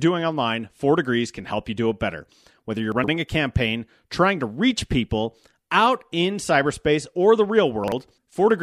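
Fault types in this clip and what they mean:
Chunks out of order, 2.92 to 3.08 s and 7.84 to 7.92 s: 40 ms blocks of sound play after the blocks meant to follow them, three blocks late before "a campaign trying to" and one after "in cyberspace or the". Hard joins make each moment jumbled.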